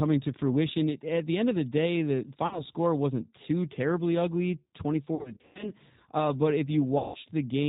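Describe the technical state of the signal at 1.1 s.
At 1.1 s the speech is passing through a G.729 codec, and that remains true for the whole clip. The narrowband sound fits G.729A at 8 kbit/s. Each 10 ms frame is rebuilt from a vocal tract filter, a pitch predictor and a few pulses per half-frame, and nothing above 4 kHz survives. The speech sounds dull and band-limited, with a rough, synthetic edge that is plainly audible.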